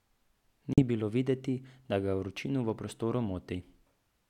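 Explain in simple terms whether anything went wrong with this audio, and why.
Yes, something went wrong. From 0.73 to 0.82 s the speech cuts out into a silence of about a tenth of a second, then returns just before "bilo videti da ga". This is a Bluetooth dropout, likely caused by wireless data reaching the headphones too late and being thrown away. Unlike a stutter or pause, where playback stops and picks up where it left off, the speech here resumes as if it had kept playing, so a small piece is simply missing.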